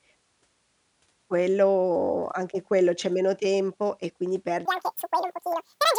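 From 4.65 s to the end at 5.99 s, the speech suddenly turns squeaky and rushed, running twice as fast and a full octave higher. This is a wrong sample rate fault, with no conversion, which fits audio recorded at 22 kHz being played back at 44.1 kHz.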